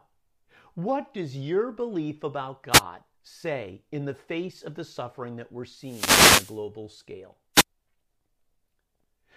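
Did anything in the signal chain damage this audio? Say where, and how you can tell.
Yes. The damage happens in the analogue radio link, before conversion. It is a wireless microphone noise hit, heard three times in this speech. A brief swish of static covers 2.71 to 2.82 s, between "does your belief about" and "say in the face". A longer burst runs from 5.79 to 6.63 s, just after "the suffering that we're". A third short hit follows at 7.54 to 7.64 s. Reflections cancel the FM carrier, so receiver noise rises over the signal.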